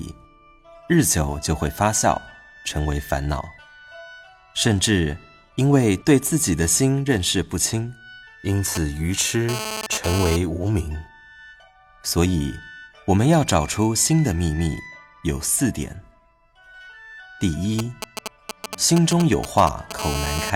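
A nearby 2G handset is leaking into this audio. From 8.75 to 10.36 s there is GSM phone buzz, a hard, raspy 217 Hz tone about 7 dB below the signal, switching on and off as the phone's data transfer does. It returns steadily from 19.99 to 20.50 s during a call. The audio circuitry is rectifying the phone's radio pulses, so a spectrogram shows a dense comb of harmonics at 217 Hz spacing, and the waveform shows regular spiky bursts. From 17.79 to 19.93 s, GSM signalling bursts, roughly 5 dB below the signal, give a galloping dit-dit-dit of brief 217 Hz buzzes. They appear as short vertical clusters of harmonic stripes separated by gaps.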